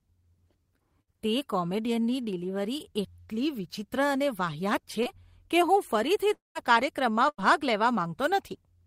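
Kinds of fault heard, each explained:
Burst of packet loss: twice a run of audio never arrived, at 1.01 s just before "તે કોમેડિયનની" and again at 7.29 s. The receiver stretched the last sound into a fading buzz or hiss for about 57 ms and 90 ms, then skipped ahead past roughly 60 ms and 100 ms of lost speech.
Short concealed packet loss: at 5.03 s, between "એટલી વિચિત્ર અને વાહિયાત" and "કે હું", about 20 ms went missing. The decoder patched it by extending the previous sound for 22 ms and blending back in, so you get a quick smear or wobble rather than an obvious hole.
Long network dropout: right after "કે હું", from 6.33 s to 6.57 s, the audio cuts out for about 220 ms, most likely because the network stopped delivering packets. The last sound is carried on and fades, leaving around 160 ms of silence before speech picks up again further along.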